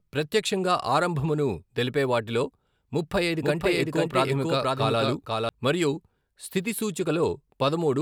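From 3.41 to 5.49 s the speech is heard twice at once, a second copy about as loud trailing roughly half a second behind, starting and stopping abruptly: a doubled audio track, likely from a second capture path.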